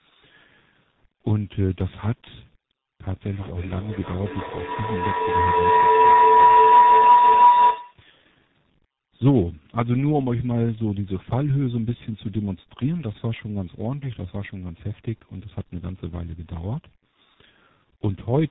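Speech that's been through tandem speech coding the whole way. It sounds rough, muffled and warbly, with nothing above 3.8 kHz, which fits about three speech codecs in a row ending in a low-rate coder like G.723.1. From 3.32 to 8.13 s there's a feedback howl around 5 kHz, peaking about 12 dB over the speech, with repeats roughly 0.3 s apart, from a mic-to-speaker loop building on itself.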